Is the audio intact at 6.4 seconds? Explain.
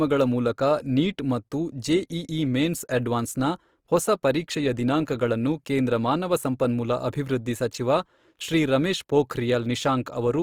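No. At 6.4 s, as everywhere else in the speech, there's plainly audible damage that's most likely Opus compression in its music-style CELT mode. The sound still reaches up to about 20.3 kHz, so it isn't muffled, but with too few bits the encoder fills short-changed bands by copying lower ones or with noise. That gives the speech a rough, grainy texture, which fits a low bitrate around 24 kbps.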